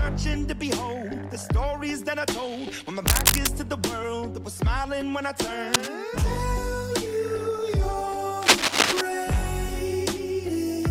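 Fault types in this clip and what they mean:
Cable scratch noise, at 3.07–3.48 s, 5.73–5.96 s and 8.42–9.01 s: dense, ragged bursts of scratchy rustle sit over the sound, about level with it or slightly louder, likely from a worn cable or connector being moved so its contact resistance flickers rapidly.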